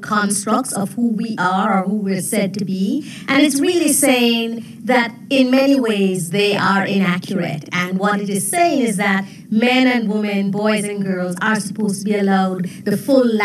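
Right through the clip there's channel delay doubling: one side runs about 46.4 ms late, which fits a 2048-sample buffer, so the mono sum carries an equal-level slap echo.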